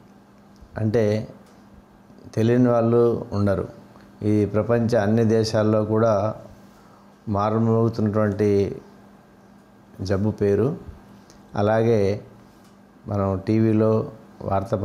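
From start to finish the background breathes: it swells up whenever the sound pauses and sinks back each time something loud arrives, a swing of around 5 dB that never settles. Loud and quiet moments sit unnaturally close in level, giving a flattened, squashed character. This is gain pumping, likely from input gain set far too high for the microphone, with a fast limiter or compressor clamping down on every peak and releasing in the gaps.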